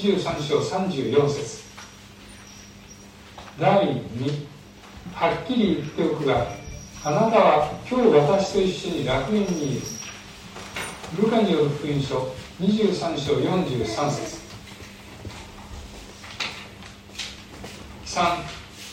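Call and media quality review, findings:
Dropped samples at 11.99 s: one sharp click, waveform jumps a fraction of a millisecond ahead; likely buffer handoff. No silent gap, unlike a dropout.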